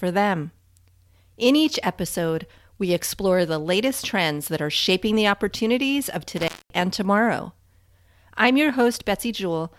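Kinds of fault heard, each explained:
Intermittent contact: between 6.37 and 6.81 s the speech drops out while a loose connection in the signal chain briefly opens. For about 221 ms the line carries no programme, so the voice vanishes and a faint hiss remains. At the moments the contact breaks and then remakes, the sudden jump in the signal produces short crackles at each edge of the gap before the speech returns.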